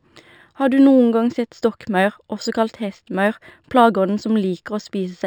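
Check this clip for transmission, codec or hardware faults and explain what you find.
One fault runs through the whole speech clip: imaging from linear upsampling. The audio appears to have been raised from 12 kHz to 44.1 kHz by straight-line interpolation between samples. That is a poor anti-imaging filter, so the top of the original band near 6 kHz is softened. A faint mirrored copy of the spectrum sits between 6 and 12 kHz, roughly 35 dB down, heard as a thin metallic shimmer on sibilants.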